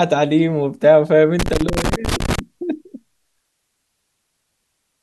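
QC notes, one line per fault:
1.39–2.39 s, loose connector crackle: an irregular burst of scratchy crackle over the speech. A worn contact keeps breaking, chopping the signal.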